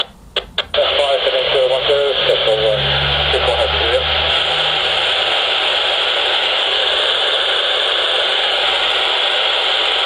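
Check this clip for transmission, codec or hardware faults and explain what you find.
A regular ticking runs from 1.7 s to 5.2 s, ten small clicks per second riding on the sound and falling silent wherever the signal drops away. This is a resampler restarted on every block: the 48 kHz to 44.1 kHz conversion was run separately on each 100 ms block, so at each block edge the filter worked without the true neighbouring samples, leaving a small error there. Those edge errors, one every 100 ms, produce the 10 Hz ticks.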